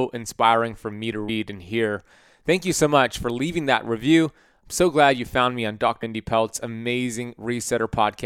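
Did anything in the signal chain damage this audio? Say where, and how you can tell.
Yes, at the codec stage: damaged data in the compressed stream. There's a brief glitch at 1.28 s, between "inspiring for me to" and "and hear", and another at 6.02 s after "you found me on". The decoder hit corrupted frames, lost sync and hunted for the next frame header.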